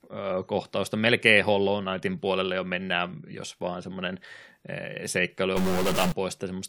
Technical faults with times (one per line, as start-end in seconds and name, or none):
5.57-6.12 stuck bit